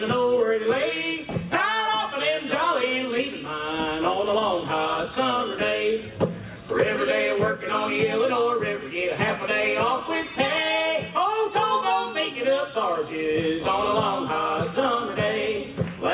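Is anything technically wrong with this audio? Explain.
No, nothing technically wrong can be heard in this audio. There is no fault to point to at any moment in the clip.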